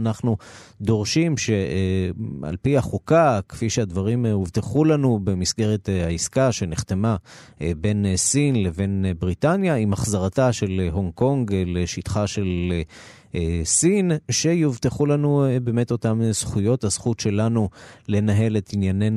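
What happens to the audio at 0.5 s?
At 0.5 s the speech plays through cleanly, with no audible dropout, click, distortion or other fault at that moment.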